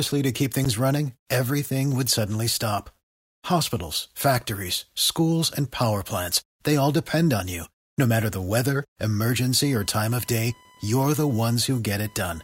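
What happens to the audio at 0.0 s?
Nothing goes wrong at 0.0 s; the audio is intact at that moment.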